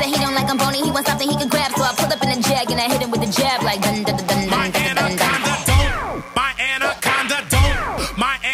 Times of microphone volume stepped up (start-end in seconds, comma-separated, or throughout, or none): none